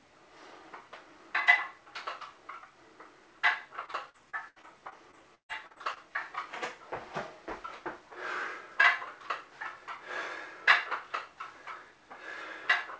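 From 3.86 to 5.98 s there is repeated packet loss (robotic sound): eleven gaps, the longest 139 ms, each patched by stretching the preceding sound. About a fifth of that span is filled this way, so the audio turns choppy, with pieces missing.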